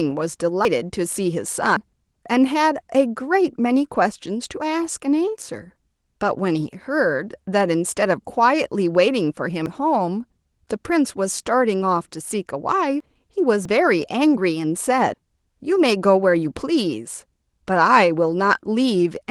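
Speech with six abrupt jumps where the sound skips forward without any gap, at 0.65, 1.77, 9.66, 13.00, 13.65 and 15.14 s, each skipping roughly a tenth to a fifth of a second. The likely cause is a dropped buffer (overrun), where capture audio was overwritten before being read.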